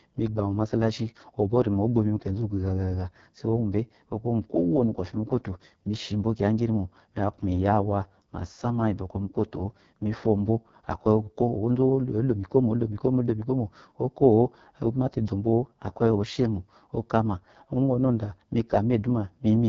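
From start to finish the speech sounds rough and raspy, with a buzzy, grainy edge on every syllable and nothing above about 7.6 kHz. This is heavy AMR wideband (HD Voice) codec damage. The codec models speech below 6.4 kHz with a pulse-driven vocal tract and fills the top band with shaped noise. At such a starved rate the excitation pulses are coded too coarsely, which fits the lowest 6.6 kbit/s mode.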